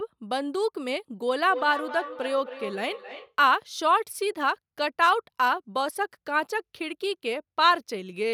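From 1.49 to 3.36 s the speech is followed by a feedback echo between two devices: a second device in the same room plays the call back, and that microphone picks it up again, out of reach of its own echo canceller. Each word returns at a fixed gap of roughly a third of a second, at about -13 dB, sounding thinner and more ringing than the original. That steady, spaced repeat sets it apart from room reverberation, which smears rather than repeats.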